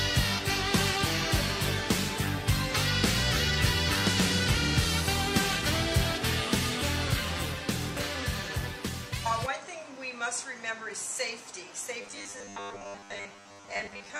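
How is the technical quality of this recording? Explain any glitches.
The recording has three audible glitches: two brief dropouts patched over by the decoder, and a metallic buzz across the last two seconds.

At 2.36 to 2.43 s, and again at 12.81 to 12.84 s, the sound briefly turns smeared and noisy. This is AAC frame loss with concealment: a single lost frame, about 43 ms of audio, was replaced by the decoder with an estimate built from the last good spectrum.

From 12.01 s to the end at 14.19 s, the sound becomes a rigid, metallic buzz pitched at 100 Hz. This is robotic sound from repeated short buffers. The likely cause is late-arriving audio, with the playback repeating a 10 ms slice to fill each gap while most of the real signal is skipped.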